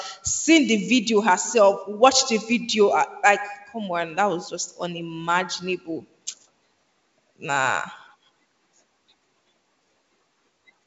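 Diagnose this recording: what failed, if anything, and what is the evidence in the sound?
Nothing in this recording failed.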